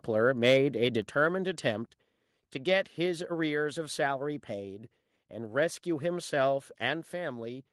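From 0.45 to 0.56 s, peaks turn harsh and crackly, about 3 dB over full scale. This is likely microphone overload, with a small share of samples flattened. At 1.02 s the speech and background drop by about 4 dB, and at 2.04 s by about 2 dB. This is likely the microphone volume stepped down by the call software.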